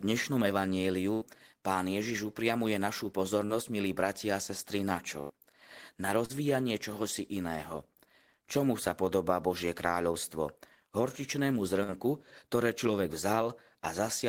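Bursts of packet loss at 1.13 to 1.23 s and 5.21 to 5.31 s each drop about 80 ms. The receiver extends and fades the last sound into a held buzz or hiss before the speech resumes further on. Short concealed packet loss at 3.45 to 3.51 s and 6.25 to 6.31 s fills 40 ms gaps with continued pitch or noise, heard as a brief smear or wobble. A final burst at 11.83 to 11.90 s loses about 40 ms.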